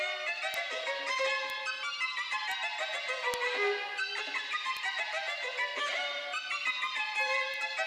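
The audio carries six bit error spikes. Each is a single sharp tick, heard at 0.54, 1.5, 2.52, 3.34, 4.77 and 7.54 s. They peak at about -10 dBFS at 0.54 and 3.34 s, about -16 dBFS at 1.5, 2.52 and 4.77 s, and about -22 dBFS at 7.54 s. A flipped bit shifts a sample by a power of two, then it snaps back. Most last one sample. The 3.34 s tick spans three. The ticks are broadband and ignore the surrounding sound.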